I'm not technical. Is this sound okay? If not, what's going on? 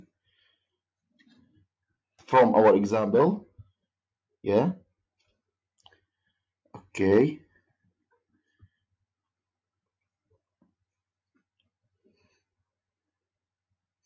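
Yes, nothing is wrong here; the lowest bass is trimmed by the normal microphone processing of a call, which is expected.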